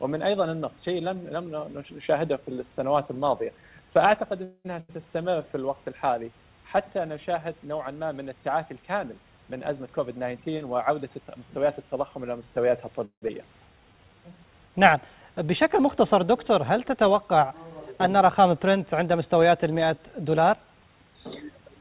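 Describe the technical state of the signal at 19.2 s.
At 19.2 s the signal is intact, with no fault present, only the narrowband call path's expected ceiling, where nothing is heard above 4 kHz.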